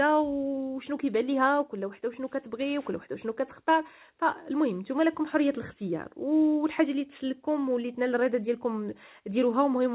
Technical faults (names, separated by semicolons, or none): none